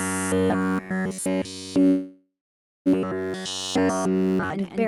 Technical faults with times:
0.00-4.88 doubled audio track
0.01-4.51 robotic sound from repeated short buffers
1.87-2.88 call audio freeze

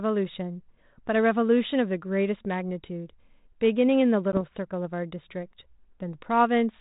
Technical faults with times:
4.32-4.38 packet loss on an ADPCM call

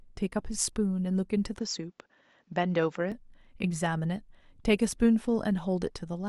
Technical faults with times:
1.59-3.12 input switched to a poorer device

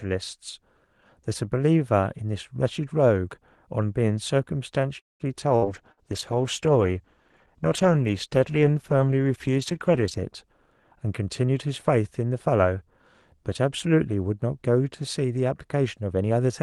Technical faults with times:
4.99-5.23 call audio freeze
5.50-10.29 call bitrate drop
5.56-5.65 burst of packet loss
5.92-6.00 burst of packet loss
10.96-11.54 jitter buffer speed-up
16.02-16.50 jitter buffer speed-up

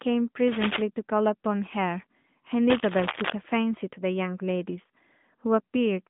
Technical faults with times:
0.00-6.09 AMR narrowband mobile codec
0.47-0.82 cable scratch noise
2.69-3.32 cable scratch noise

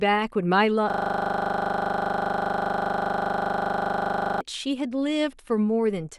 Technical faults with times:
0.90-4.41 system hang loop

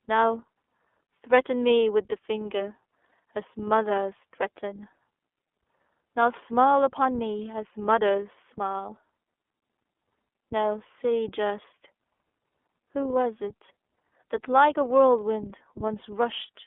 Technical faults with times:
0.00-16.66 iLBC codec
3.08-3.11 lost iLBC frames

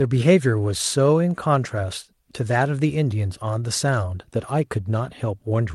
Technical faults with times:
none

